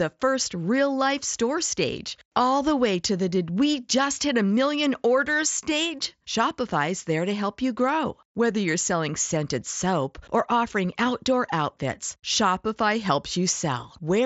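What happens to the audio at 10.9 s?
At 10.9 s the speech comes through intact, with no dropout, glitch or distortion at that moment, just the normal Bluetooth mSBC headset path with its band limit near 7.7 kHz.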